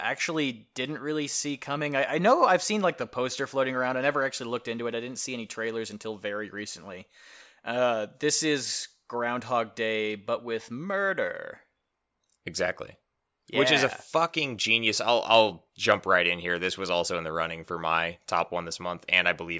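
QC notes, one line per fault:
No faults found in clip.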